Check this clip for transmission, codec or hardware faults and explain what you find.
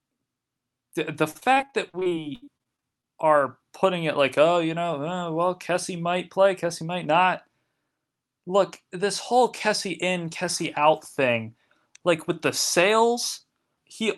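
Two kinds of transmission fault are present, heard over a band-limited call path that tops out near 12 kHz, which points to Opus at a modest bitrate.

From 1.31 to 3.05 s, just before "are putting it like", there is repeated packet loss (robotic sound). Short gaps up to about 70 ms keep being patched by extending prior sound, leaving it choppy with pieces missing.

Jitter buffer speed-up occurs from 4.77 to 5.22 s, after "it like oh you", and again from 6.37 to 7.06 s. The receiver trims pitch periods to drain excess buffered delay: about 8% faster with around 40 ms removed in the first stretch, then about 6% faster with around 50 ms removed in the second. Both stretches sound hurried at an unchanged pitch.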